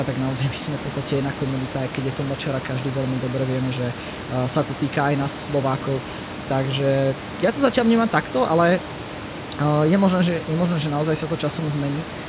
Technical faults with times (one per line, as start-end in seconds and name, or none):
none